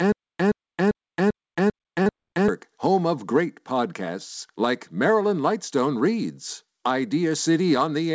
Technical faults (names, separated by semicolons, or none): stutter with silent gaps; short concealed packet loss